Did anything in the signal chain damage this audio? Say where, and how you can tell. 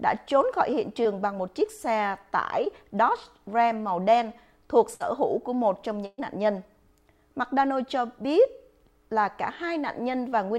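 Yes. The network stage dropped audio twice as short concealed packet loss, at 1.03 to 1.07 s and 2.65 to 2.68 s. About 20 ms arrived too late each time, and the receiver extended the preceding sound to cover it. Each gap is heard as a brief smear or wobble before the real signal blends back in.

Two bursts of packet loss follow, at 4.94 to 5.02 s and 6.06 to 6.20 s, dropping roughly 60 ms and 120 ms of consecutive audio. Concealment stretches the last sound into a fading buzz or hiss. The longer burst decays into about 30 ms of silence before the audio resumes, with the missing portion simply gone.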